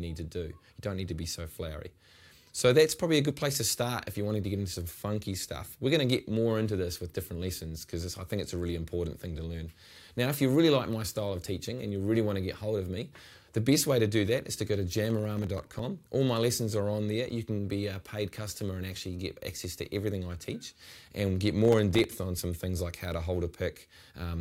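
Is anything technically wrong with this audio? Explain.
Yes. Processor overload crackle appears from 15.05 to 15.99 s and from 21.65 to 22.04 s. The processor repeatedly misses deadlines for very short buffers, around a millisecond and a half each, leaving tiny silent gaps. Unlike one longer dropout or an isolated click, these form a dense gritty burst that stops when the load passes.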